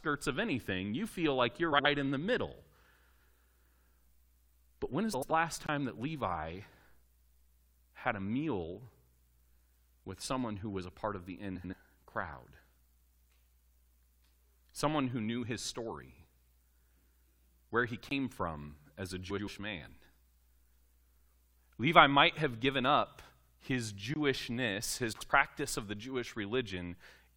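Frames out of order first appear at 1.72 s, just after "feel like you're" and before "in the middle": two neighbouring runs of frames, each about 64 ms, were decoded in swapped order. The stretch plays with its halves exchanged and sounds like a garbled flutter. No time is lost.

The same fault recurs at 3.15 s and 5.13 s, now with runs of four frames, about 85 ms each.

At 5.66 s a block of digital silence appears. A 21 ms stretch of samples was zeroed, which fits a 1024-sample output buffer that was not filled in time. The audio drops straight to dead silence and back with no fade, leaving a short hole.

Swapped frames return at 11.56 s, after "a part of the". Another silent block follows at 18.09 s. Swapped frames come again at 19.30 s, after "from as a". A third 21 ms dropout occurs at 24.14 s, and a last flutter of swapped frames at 25.12 s.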